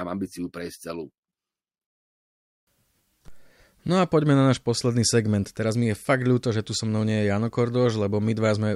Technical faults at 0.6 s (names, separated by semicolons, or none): none